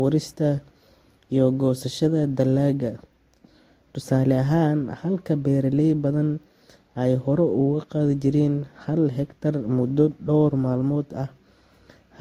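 Transcoding between lossy codecs runs through the whole speech clip: several layers of compression artefacts sit on top of one another, with a hard ceiling at 16.5 kHz. The sound points to a chain of Vorbis at around 46 kbit/s, then Opus near 48 kbit/s, then Vorbis again near 58 kbit/s, likely one pass after another. Each later encoder spends its bits re-coding the artefacts left by the previous one and adds its own, while the lowest band limit survives.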